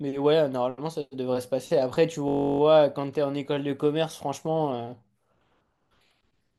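At 2.28 s the speech freezes into a system hang loop that lasts until 2.60 s. The computer or its driver stalled, but the sound hardware kept replaying the same ring buffer. One slice of 21.33 ms repeats exactly 15 times, which fits a 1024-sample buffer. Because the slice is so short, it sounds like a steady buzz at about 47 Hz. When playback resumes, the speech continues with essentially nothing missing.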